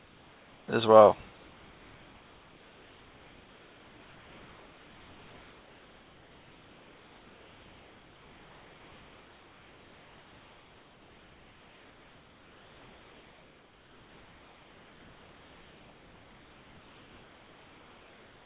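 From the start to 0.68 s, and again from 1.3 s to the end, the background between phrases becomes a flat, even hiss, about 3 dB quieter than the room sound it replaces and stripped of that room's texture. This is comfort noise in place of the background. The sending side likely stopped transmitting during pauses, and the receiver filled each gap with synthetic noise shaped only roughly like the real background, inside a band that ends near 4 kHz.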